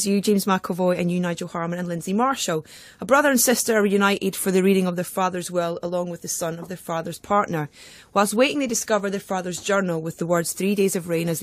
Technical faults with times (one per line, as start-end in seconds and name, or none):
none